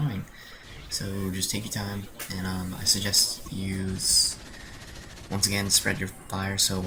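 Damaged data in the compressed stream breaks the audio twice, at 3.45–3.48 s and 6.42–6.44 s: corrupt frames make the decoder lose sync, leaving roughly 30 ms disturbances visible as narrow vertical bands.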